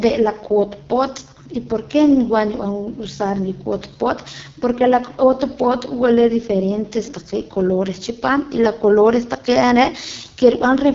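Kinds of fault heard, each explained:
AMR wideband (HD Voice) codec: The speech has that rough, raspy, buzzy edge you get when AMR-WB is starved, which fits its lowest 6.6 kbit/s mode. The vocal-tract model can't keep up, detail smears, and nothing comes through above about 7.1 kHz.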